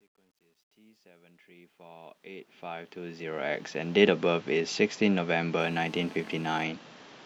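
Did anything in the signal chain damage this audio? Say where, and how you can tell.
Yes, two problems. The first is in the sample-format or gain stage: truncation distortion on the fade-in. The clip fades up smoothly over the first 4.0 s, but the quiet early part, worst from 0.0 to about 2.35 s, sounds gritty. That's a volume ramp applied without dither at too short a word length, which fits about 11 bits. The low-level waveform collapses into a few coarse steps.

The second is in the analogue wiring: GSM phone buzz from 5.6 to 6.64 s. It's a hard, raspy buzz at about 217 Hz, thick with harmonics and unrelated to the speech, sitting about 25 dB below the signal. It stays nearly steady for its span, which points to a handset on a call. The phone's bursts get rectified somewhere in the audio circuit and demodulated into the audio.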